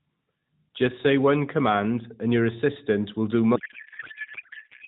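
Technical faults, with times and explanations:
3.56–4.87 s: codec payload misread. Right after "your assistant will do", the speech turns into garbled warble that barely tracks it. This fits octet-aligned AMR frames being unpacked as bandwidth-efficient. Unlike a dropout, the sound continues to the end.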